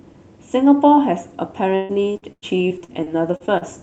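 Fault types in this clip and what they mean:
repeated packet loss (robotic sound): From 1.75 to 3.63 s, eleven gaps are patched by repeating the last sound. Speech turns choppy and robotic. The longest gap lasts 136 ms.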